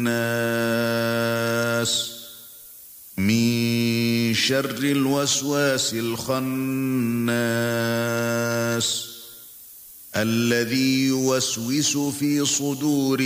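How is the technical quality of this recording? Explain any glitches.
Quality's held back by one problem that runs the whole length: low bit depth with noise shaping. The audio sits on just 7 bits, and the rounding error gets pushed up the spectrum, so you hear a steady, thin hiss, only around 15 dB under the signal, climbing hard toward the top end.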